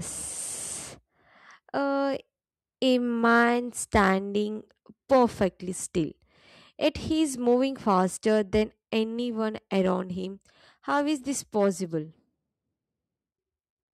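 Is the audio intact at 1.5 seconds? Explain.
Yes, at 1.5 seconds the speech plays through cleanly, with no dropout, click, distortion or other audible fault at that point.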